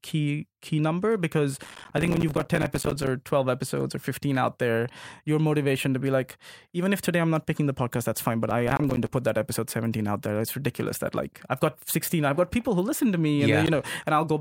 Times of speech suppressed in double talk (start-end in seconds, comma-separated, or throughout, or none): none